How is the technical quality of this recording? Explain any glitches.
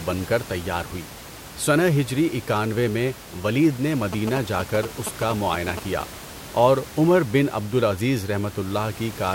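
The recording has one clear glitch: GSM signalling bursts. From 4.13 to 6.02 s, just after "اکانوے میں ولید نے", a galloping dit-dit-dit of short 217 Hz buzzes cuts in. It sits only a little below the speech. A nearby 2G phone is signalling, and the audio circuit rectifies its radio bursts. Faint room noise sits about 17 dB below the speech.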